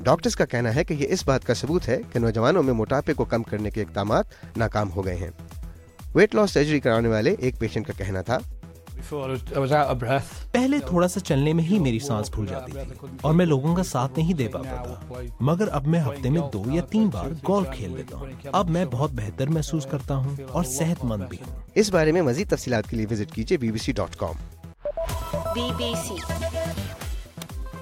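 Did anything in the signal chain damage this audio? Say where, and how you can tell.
Yes. From 14.60 to 16.12 s everything slows 5.87% and sinks about 105 cents, then snaps back; 22.04 to 22.76 s runs 5.87% fast, about 99 cents sharp. That's likely a drift correction step at the buffer stage, with clock matching jumping the rate to refill or drain it.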